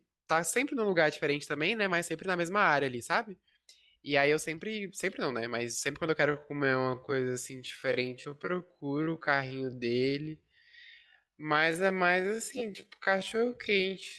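From 6.24 s to the end, the speech slows to about 0.57 times its pace while pitch holds, so it drags. This is likely a time-stretched section.

At 12.57 to 12.64 s, repeated frames cause a stutter. A 10 ms block, fitting a single frame, plays three extra times, adding 30 ms.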